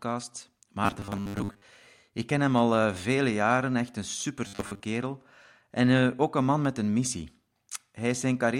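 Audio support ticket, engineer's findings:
Robotic sound from repeated short buffers, 0.84 to 1.64 s and 4.47 to 4.81 s (after "vele jaren echt een"). The speech becomes a rigid metallic buzz at 100 Hz, likely from input starvation: one 10 ms chunk replays while most real audio is skipped. A steady imposed pitch, not silence or clicks, separates it from plain dropouts.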